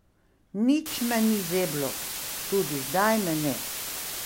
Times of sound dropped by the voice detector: none

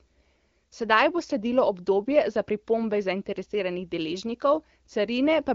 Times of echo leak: none

